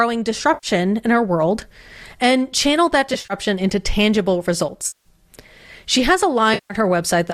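Smeared, noisy patches break into the speech four times. The first runs from 0.54 to 0.67 s, just before "in our world and". The second, from 3.14 to 3.34 s between "world and channel that" and "into tangible", is a stutter of short gaps of about 40 ms at most, totalling 100 ms. The third, from 4.87 to 5.08 s after "into tangible", lasts 180 ms, and the fourth, from 6.54 to 6.74 s, lasts 160 ms. This is AAC frame loss with concealment. The decoder rebuilt the missing stretches from the last good spectrum, in steps that fit 10 ms frames, which is why they turn hazy rather than silent. That frame size fits low-delay AAC, likely AAC-ELD at 64 kbps, whose coding damage is light.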